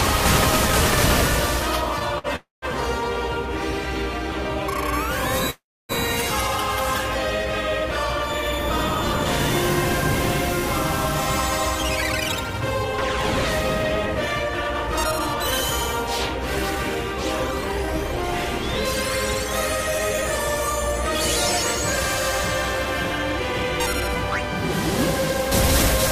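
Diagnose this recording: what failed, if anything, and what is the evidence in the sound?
The network stage failed, with the receiver's jitter buffer reacting to late packets. There is a short stall from a late packet at 2.18 to 2.27 s. The last sound is held about 54 ms too long, then resumes from the same place. Nothing is lost.

There are two call audio freezes, at 2.36 to 2.65 s and 5.50 to 5.92 s. The sound is continued, fades, then falls silent for 170 ms and 290 ms. The audio resumes where it stopped, adding 263 ms and 388 ms of delay. Packets held up in transit are the likely cause.

There is a jitter buffer speed-up at 11.75 to 13.10 s, 14.02 to 18.32 s, 19.44 to 21.05 s and 21.77 to 24.16 s. Playback runs 5 to 7 percent fast at unchanged pitch and sounds hurried. The receiver drains excess buffered delay by cutting pitch-period slices, roughly a third of a second in the longest span.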